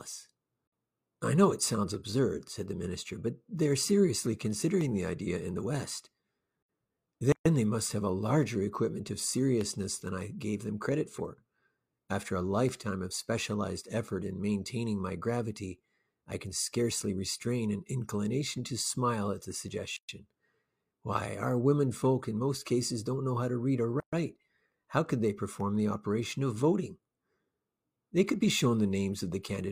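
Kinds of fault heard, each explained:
Gap at a join of encoded pieces: separately encoded speech segments were joined untrimmed, leaving silences of about 120 to 130 ms that show as blank vertical columns with smeared edges on a spectrogram.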